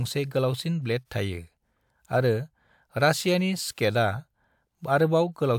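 No technical faults are audible.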